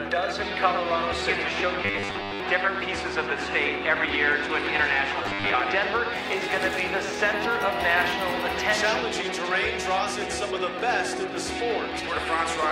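From 1.83 to 2.40 s, the sound turns into a rigid, metallic buzz. It happens again from 5.23 to 5.54 s. This is robotic sound from repeated short buffers. Fresh audio likely arrived too seldom, so short fragments were replayed to fill the gaps. Roughly two thirds of the material is repeats, and the real audio between them is lost. The buzz sits at a fixed 100 Hz, matching a 10 ms repeat.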